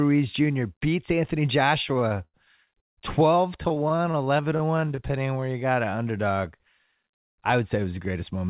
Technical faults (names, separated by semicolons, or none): repeated stalls (stutter); jitter buffer slow-down; jitter buffer speed-up